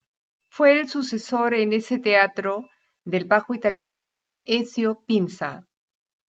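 Right after "ese teatro del bajo", at 3.69 s, the speech smears into a short fading buzz and then drops to near silence until 4.47 s, returning with that stretch missing. This is likely a long network dropout, where concealment ran out after a brief fill, heard over Opus-coded audio limited to about 8 kHz.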